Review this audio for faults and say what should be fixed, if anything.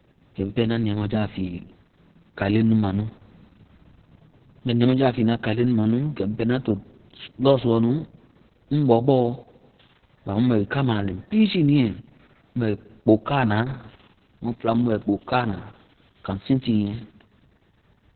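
Opus voice compression affects the whole speech clip. Nothing remains above 4.3 kHz, and the voice is muffled, hoarse and faintly robotic, which fits SILK narrowband coding near 6 kbps. A plain low-pass filter would only dull the sound, but this coarse excitation coding also adds a grainy, buzzy roughness. Encoding at a higher bitrate would let Opus keep a wider band and finer excitation detail.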